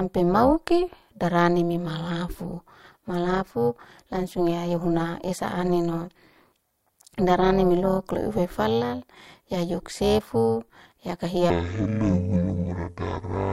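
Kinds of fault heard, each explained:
Overlap-add ripple: The speech was split into windowed frames and rejoined with an overlap whose gains do not add up evenly, so the level dips and recovers once per frame, by about 11 dB, at around 300 Hz. This rate is too fast to hear as separate pulses. Instead it lends the whole clip a buzzy, robotic roughness. A slow tremolo would pulse audibly, and dropouts would leave actual gaps. Here the sound is continuous but grainy from start to finish.
Section at the wrong speed: From 11.50 s to 13.52 s, the closing stretch plays at 0.534 times its proper speed. The speech there turns slow and drawn out and drops roughly ten semitones, so it sounds heavy and sluggish. The likely cause is that this stretch was played or resampled against the wrong clock. Because pitch and tempo fall together, it differs from a pitch shift, which keeps the timing, and from a time stretch, which keeps the pitch.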